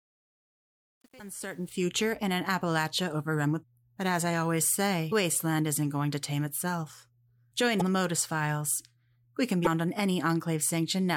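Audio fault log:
0.0 to 1.86 s, truncation distortion on a fade: the fade-in was applied by a digital gain stage that kept too few bits and added no dither. The coarse steps fit an 8-bit stage. While the level is low, from 0.0 to about 1.58 s, the waveform collapses into a handful of square steps, so the speech comes in gritty instead of rising cleanly. By about 1.86 s the fade-in has reached full level.
1.16 to 1.21 s, 3.59 to 3.64 s, 5.08 to 5.13 s, 7.77 to 7.82 s, 9.63 to 9.67 s, damaged data in a compressed stream: at each of these points corrupted bytes in the compressed data made the decoder misread or discard frames, lose sync and hunt for the next valid frame header. Each event lasts roughly 40 ms and is heard as a chirp, squawk, click or short hole cutting across the speech.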